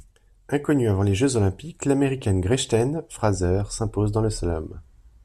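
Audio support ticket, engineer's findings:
No faults found in this speech recording. Nothing in the signal path needs follow-up on this ticket.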